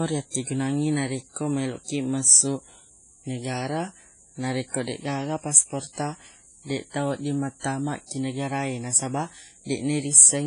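Throughout, the speech sounds washy and ringing, with breathing hiss and nothing above 10.1 kHz, likely heavy WMA compression, fitting a bitrate near 24 kbps.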